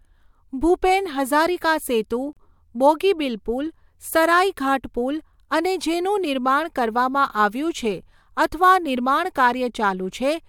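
At 2.33 s the speech drops into a short hole of about 36 ms, ending at 2.37 s, right after "ભૂપેન હઝારિકા સેતુ". The edges are smeared, and the sound resumes with "બોગીબીલ પુલ સરાઇઘાટ પુલ" exactly where it left off. This is a gap at a join of encoded pieces: separately encoded segments were butted together untrimmed, so one run's padded final frame and the next run's start-up silence both remain.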